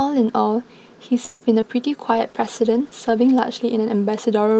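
At 1.25 s the speech stalls for about 156 ms, to 1.43 s, with the last sound smeared on as a fading buzz before things resume where they stopped. That's a call audio freeze, likely the jitter buffer running dry while packets were held up. Nothing is lost; the rest just arrives later.

Right after, at 1.61 s, there's a short concealed packet loss lasting until about 1.64 s. Roughly 20 ms of audio never made it to the decoder, so the receiver patched it by stretching the preceding sound and blending back, which comes across as a quick smear or wobble.

From 2.13 s to the end there's a call bitrate drop. The Opus encoder was squeezed from 32 kbps down to 13 kbps, sitting at the bottom for about a second. The speech gets coarser and more watery, losing some of the crispness that the normal 8 kHz call bandwidth carries.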